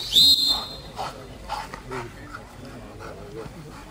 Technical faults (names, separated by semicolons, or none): crude rate conversion